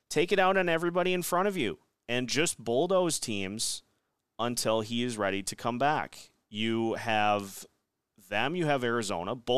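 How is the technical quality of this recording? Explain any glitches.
Nothing technical gets in the way here: the speech runs along without any glitches or hiccups worth pointing out.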